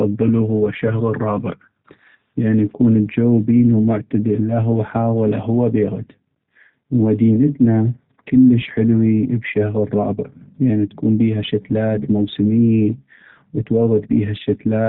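From start to end the speech carries G.729 codec damage, plainly audible and consistent with an 8 kbit/s G.729A coder. Each 10 ms frame is rebuilt from a vocal tract filter, pitch predictor and sparse pulses, so nothing above 4 kHz survives, and the voice sounds muffled, rough and slightly synthetic.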